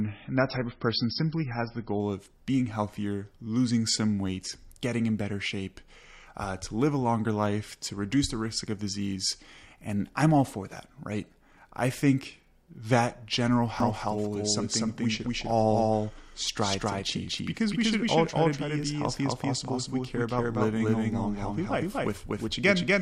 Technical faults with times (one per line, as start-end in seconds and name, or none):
0.00-2.00 adaptive stream starting at a low bitrate
13.80-23.02 doubled audio track